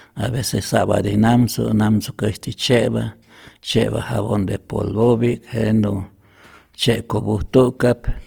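From start to finish, the speech carries Opus compression damage, and it is plainly audible. The cause is likely an Opus encoder running in its music mode at a low bitrate, one that fits about 24 kbps. Bandwidth stays wide, reaching up to about 20.2 kHz. With too few bits, the encoder keeps each band's energy but fills the detail with folded or noise-like content. Voiced sounds come out rough and grainy rather than clean.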